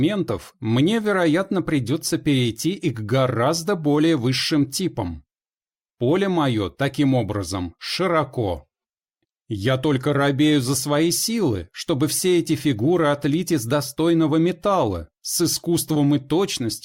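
No technical faults can be heard anywhere in the audio. Nothing in the recording or playback chain draws attention to itself at any point.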